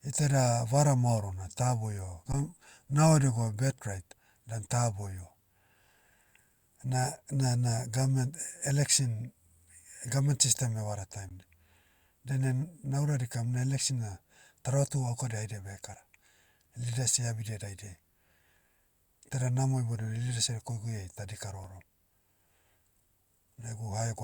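Speech with three brief underruns with held sample at 2.32, 11.29 and 21.64 s. The waveform freezes flat as the converter holds its last value, and audio is lost during each gap.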